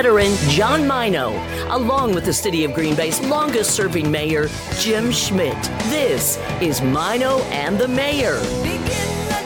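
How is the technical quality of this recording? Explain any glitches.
Nothing stood out as a technical problem on listening to this recording, so there are no glitches to explain.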